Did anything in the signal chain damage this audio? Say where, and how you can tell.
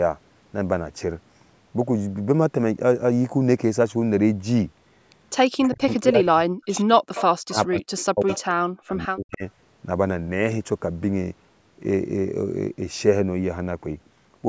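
Yes. The speech drops away in three stretches, from 5.57 to 7.03 s, 7.43 to 8.31 s and 8.63 to 9.44 s, falling by as much as about 40 dB at its deepest, for roughly a second in the first stretch and under a second in each of the others. This is speech suppressed in double talk, most likely in the call's echo canceller. With both sides talking at once, it could not separate the local talker from the loudspeaker echo and turned everything down.

Short ghostly repeats surface at 5.63–5.68, 7.14–7.23, 7.97–8.05 and 8.27–8.41 s, each trailing the speech by 143 ms and sitting roughly 10 to 25 dB below it. That fixed delay marks an echo leak, likely from a far end playing the call on a loudspeaker whose echo canceller failed to remove everything its microphone picked up. The leftover scraps were sent back down the line, mostly overlapping the stretches where the double-talk suppression was active.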